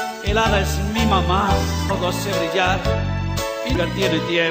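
Two short bursts of damaged data in a compressed stream: one at 1.89 s and one from 3.75 to 3.77 s. Corrupted bytes in the coded frames make the decoder misread them and lose sync, so each spot sounds like a brief chirp or blip in the audio.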